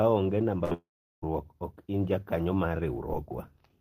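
At 0.64 s the speech briefly smears into a held sound that fades over about 60 ms, then picks up at 0.72 s with a short piece skipped. This is a burst of packet loss: several consecutive packets were lost or arrived too late, so the receiver stretched the last sound to cover about 60 ms of missing audio.

From 0.74 s the sound again trails off into a decaying tail of the last sound, and after roughly a tenth of a second it gives way to near-silence lasting about 380 ms, until speech returns at 1.23 s. That is most likely a long network dropout. The receiver briefly extended the last sound, then went quiet for the rest of the gap, and about 490 ms of speech is gone.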